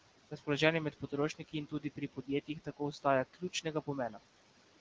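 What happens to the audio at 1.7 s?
At 1.7 s the speech is cut by the noise suppressor, between 1.29 and 2.29 s. It mistakes parts of the speech for noise and pulls them down by up to about 17 dB. Roughly a third of a second sounds swallowed and faint. Noise suppressor artifacts are present here too. The background is held down by about 18 dB, so the residue sinks and rises with the speech.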